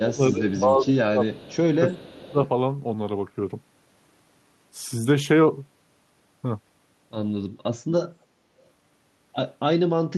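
Speech suppressed in double talk runs from 0.01 to 1.67 s: the speech dips by up to about 15 dB for roughly one and a half seconds, likely an echo canceller turning down the near talker while the far side also spoke. Echo leak occurs within it at 0.5 to 0.6 s and 1.37 to 1.5 s, where a faint copy of the speech arrives 348 ms late at about 30 dB below it, likely loudspeaker pickup the canceller failed to remove. Suppression returns from 1.92 to 2.38 s, dropping the speech by up to about 25 dB for around half a second. Overlapping it, echo leak from 2.07 to 2.49 s brings the same 348 ms delayed copy back, now slightly louder, at about 25 dB below the speech.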